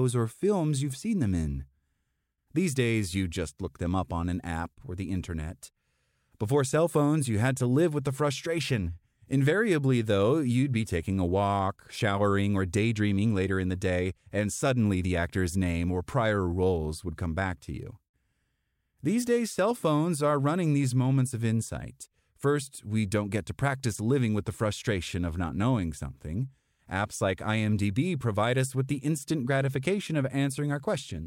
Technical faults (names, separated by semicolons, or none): none